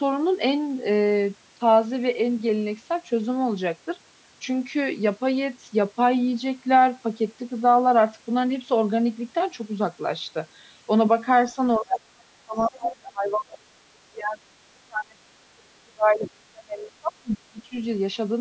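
From 11.79 to 12.14 s the speech sinks by roughly 35 dB. This is speech suppressed in double talk: the level collapses while another talker is active, likely because the echo canceller could not tell the local voice from loudspeaker echo and attenuated both. On a waveform the envelope pinches almost flat, and on a spectrogram the harmonics fade to near-blank columns, with the band ending at 8 kHz as call microphone processing normally leaves it.

Inside that dip, from 11.92 to 11.97 s, a brief fragment of the other side's voice leaking through is heard, only about 5 dB below the speech and so clearly audible. It is likely residual loudspeaker echo the canceller missed, showing as a short, isolated burst of unrelated harmonic striations.

Further suppression follows from 12.44 to 14.43 s, about 25 dB deep. Within it, a faint leak at about 30 dB below the speech appears from 12.58 to 12.69 s as a thin, barely visible trace. 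The level drops again by about 30 dB from 14.73 to 15.2 s, and by about 35 dB from 15.39 to 17.73 s. Each of these shows as a dip in the envelope where the voice is turned down.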